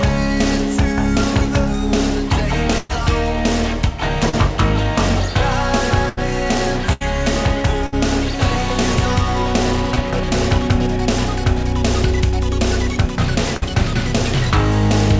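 Bursts of packet loss occur at 2.78, 6.09, 6.93, 7.87 and 13.57 s, with roughly 120, 80, 80, 60 and 40 ms of audio lost. Each time the receiver extends the last sound and fades it, producing a held buzz or dying hiss before playback jumps ahead past the missing stretch. Short concealed packet losses at 4.29 and 9.94 s drop about 40 and 20 ms; the decoder patches each hole by continuing the preceding sound and blending back, heard as a brief smear or wobble. All of this passes through a WebRTC call path whose band stops at 8 kHz, which fits G.722 at 64 kbps.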